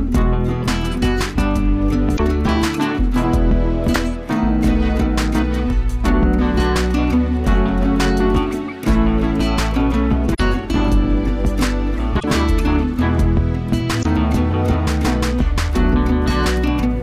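At 2.13 to 2.20 s, 3.91 to 3.96 s, 10.33 to 10.40 s, 12.16 to 12.24 s and 13.99 to 14.06 s, the sound is broken by damaged data in a compressed stream. Corrupted bytes leave the decoder misreading frames until it locks onto a fresh frame header. Each break lasts 56 to 81 ms. The irregular spacing of these breaks sets them apart from a buffer underrun, which tends to recur at a steadier rhythm.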